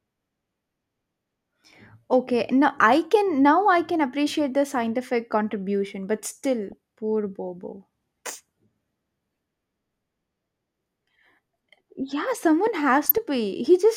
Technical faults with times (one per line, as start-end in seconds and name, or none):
6.69-6.72 DAB burbling
13.04-13.18 DAB burbling